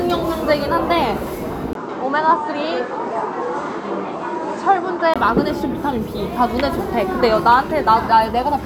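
At 1.73 s the sound goes duller after a 20 ms gap, likely an input switched to a poorer device, and it clears again at 5.16 s. Between those times a spectrogram shows nothing above 8.8 kHz, plus a new noise floor about 35 dB down, with no waveform level jump.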